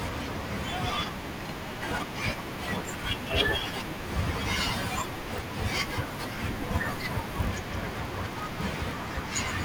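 From 4.90 s to the end of the clip, the speech takes on a steady buzz at about 43.1 Hz, a rough, gated texture laid over the voice while its timbre stays the same. This is a block size mismatch (padded). One stage hands over blocks slightly shorter than the next stage reads, and the shortfall in each block is filled with silence. The buzz rate fits a 1024-sample read block. The gaps are tiny, so the speech is slowed only negligibly, to about 0.999 of normal speed.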